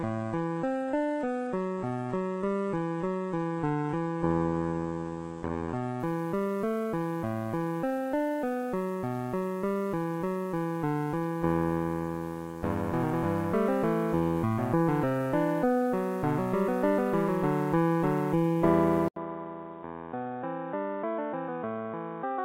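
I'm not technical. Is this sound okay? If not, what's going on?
No. From the start to 6.0 s, an adaptive stream starting at a low bitrate plays a reduced-quality version while the player gauges the connection. Nothing above 11 kHz comes through, so the treble is gone. At 6.0 s a better version takes over and the sound brightens abruptly, with no gap.

At 19.08 s the sound drops out for 80 ms, then returns duller, quieter and with new background noise, lacking everything above 3.8 kHz until the end. This most likely means the input switched to a poorer device that captures less detail.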